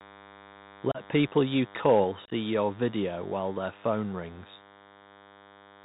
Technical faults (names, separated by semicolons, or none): DECT cordless phone buzz; Bluetooth CVSD headset codec; unconcealed Bluetooth headset packet loss; microphone overload; microphone volume stepped down